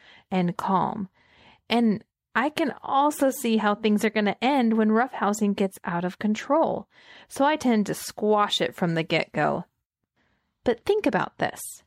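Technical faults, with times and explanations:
No technical faults can be heard in this speech recording. There is nothing to mark with a time or explain.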